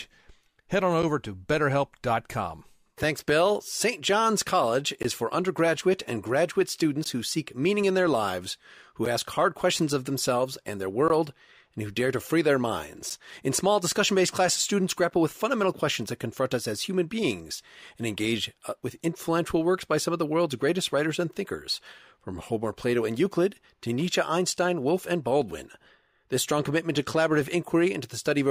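Gaps between stream segments leave brief, hard-edged silences in the speech at 1.02, 3.03, 5.03, 7.04, 9.05, 11.08, 13.10 and 15.10 s. Timestamps of the 2 s segments misalign, so the player inserts silence.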